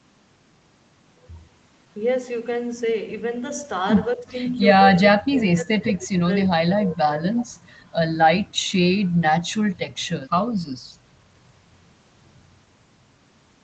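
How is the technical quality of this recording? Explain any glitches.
The recording has two dropouts in the speech, plus a band limit near 8 kHz from the call path. From 4.16 to 4.34 s and again from 4.94 to 6.29 s, speech is suppressed in double talk. The likely cause is an echo canceller that, with both ends talking, mistook the near talker for loudspeaker echo and attenuated everything. The voice sinks by roughly 20 dB in the first dip and roughly 25 dB in the second, fading for about 1.2 seconds in total.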